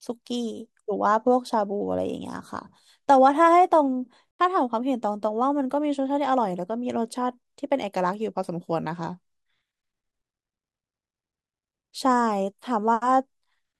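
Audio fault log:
4.34 to 4.39 s, corrupt frame muted: the speech drops into a sudden hole of silence lasting about 58 ms, then resumes. Damaged bits made the decoder reject the compressed data for that stretch. The player filled the gap with silence instead of noise. The gap's length fits two lost frames of about 29 ms each. Nothing is skipped or shifted, so the speech after the gap stays in time.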